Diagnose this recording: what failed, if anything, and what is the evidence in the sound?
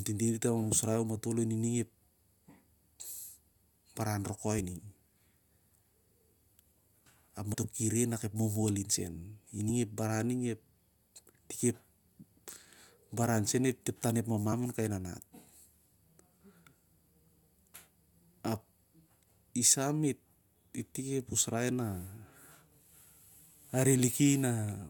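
At the codec stage, whole compressed frames never reached the output, either missing from the stream or rejected by the decoder as damaged, so these are compressed frames skipped. The speech jumps forward about 70 ms at 7.53 s, just before "ki re", and about 20 ms at 15.65 s.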